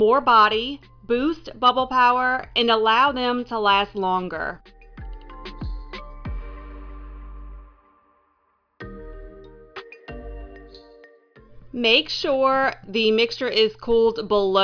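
No technical faults can be heard anywhere in this audio. Nothing in it stands out as a problem to describe.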